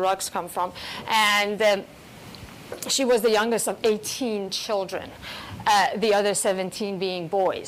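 No dropouts, glitches, distortion or other technical faults can be heard anywhere in the clip.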